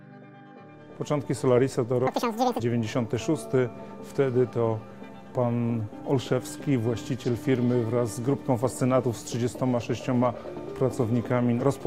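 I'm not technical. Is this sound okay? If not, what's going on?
No. From 2.07 to 2.60 s, the sound jumps to twice its normal speed and an octave higher. This is audio read two samples at a time (double speed). The player grabs two samples as one step.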